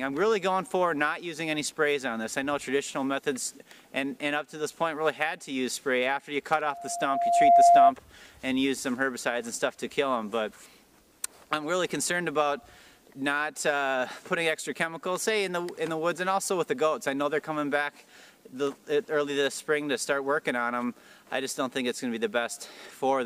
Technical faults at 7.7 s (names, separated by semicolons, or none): loudspeaker feedback squeal